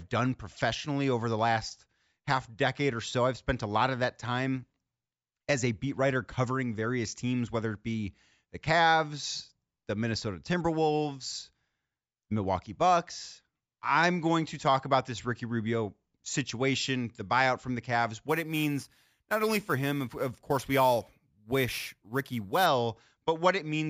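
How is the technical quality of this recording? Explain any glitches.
One glitch stands out. From 18.29 to 22.66 s the speech picks up a bright, metallic fizz between 8 and 16 kHz, about 19 dB below the speech, rising and falling with it. This is imaging from sample-and-hold upsampling: each sample was repeated without a smoothing filter, which fits a 16 kHz source raised to 44.1 kHz, leaving mirrored spectrum copies above the original band.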